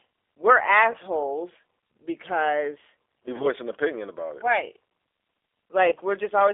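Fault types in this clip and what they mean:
G.729 codec: A low-rate speech codec that rebuilds the signal from a vocal tract filter, a pitch predictor and a few coded pulses per frame rather than the waveform itself. Here the damage is plainly audible: the band is confined to roughly 300 Hz to 3.5 kHz, and the speech has a rough, slightly synthetic edge throughout. That points to the 8 kbit/s G.729A variant.
VoIP packet loss concealed by the speech codec: When a packet goes missing, the decoder fills the gap by extrapolating from its last pitch and filter state at falling gain. Because each frame depends on the previous one, the damage outlasts the gap. Three events occur, at 0.92–0.96 s, 3.36–3.47 s and 5.90–5.95 s, each heard as a brief buzzy or smeared stretch. Each fits a single lost 20 ms packet, and the one near 3.4 s lingers longest.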